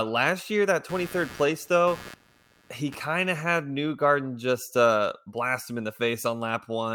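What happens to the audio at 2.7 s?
At 2.7 s you're inside a stretch of computer activity noise running from about 0.89 to 3.16 s, starting after "last year that" and clearing before "of had". Processor, graphics or mouse load is shifting the shared ground under the audio circuit. That comes through as a buzzy, chirping pulse at roughly 100 per second, sitting around 20 dB below the speech. It rises and falls with the machine's activity, not with the voice.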